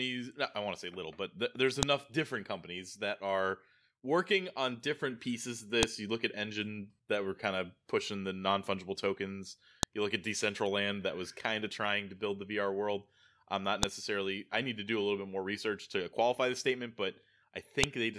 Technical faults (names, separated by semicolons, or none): file header played as audio